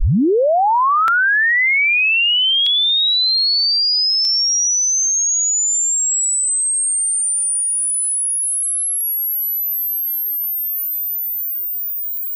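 An everyday sound recording with a regular click from 1.08 s to 12.17 s. It repeats every 1.58 s, about seven times. These are clock drift buffer slips. Two clocks likely disagree by roughly 700 ppm, so a block of around 50 samples is dropped or repeated at each click.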